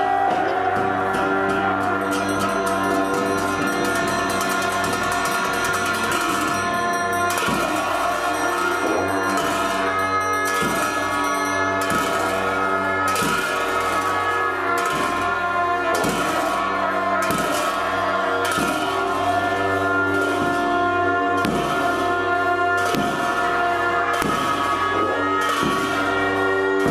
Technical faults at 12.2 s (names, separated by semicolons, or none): none